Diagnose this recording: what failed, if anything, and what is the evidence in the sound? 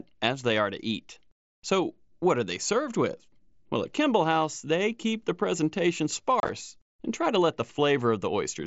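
Between 6.4 and 6.49 s the speech breaks into a brief, rough chop of short holes with abrupt edges. This is unconcealed Bluetooth headset packet loss on the wireless link. About 52 ms of audio went missing over 90 ms, the longest gap 30 ms, consistent with seven dropped mSBC frames replaced by silence or an idle pattern.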